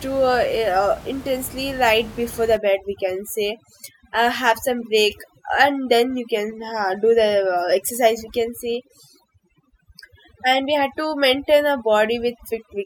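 From about 2.57 s, just after "intensely right before the", overdone noise removal kicks in and stays to the end. The reducer is clamping bands near its noise estimate, so the room noise, about 18 dB under the speech, collapses into twinkly near-silence.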